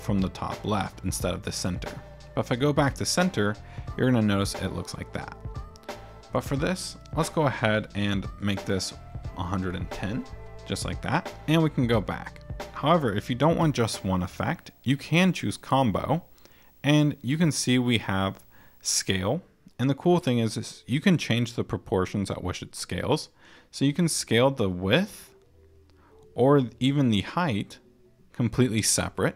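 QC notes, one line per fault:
13.59–19.34 s, video or display buzz: a 59.94 Hz buzz with hash above it and a faint 15.7 kHz whine, roughly 35 dB below the programme. A screen or video cable is coupling its field and line scanning into the audio path.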